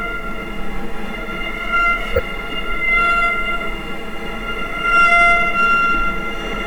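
At 2.14 to 2.20 s a corrupt frame decoded fault produces a brief chirp, squeak, blip or burst of noise: damaged bits in a few consecutive compressed frames were decoded anyway, misplacing energy with the error peaking around -5 dBFS. A spectrogram shows a brief, blocky smear across unrelated frequencies; the waveform shows a sudden spike.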